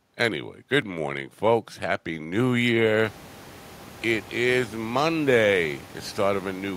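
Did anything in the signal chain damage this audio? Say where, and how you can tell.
No, nothing in the chain has damaged this speech; the room noise that comes up by about 23 dB around three seconds in is just the space the microphone was in, and it still sits about 23 dB below the talking.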